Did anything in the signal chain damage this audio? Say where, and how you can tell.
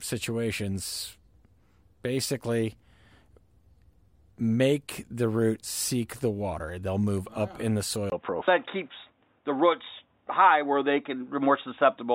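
Yes. An input switched to a poorer device at 8.1 s, just after "move up in the", and the sound stays that way to the end of the clip. A gap of about 20 ms marks the change. From there the speech turns dull and boxy with nothing above 3.8 kHz, the level shifts by roughly 5 dB, and a new noise floor appears about 50 dB below the signal. At the driver/device stage, this likely means the recording input moved to a narrower-band microphone or a headset call profile.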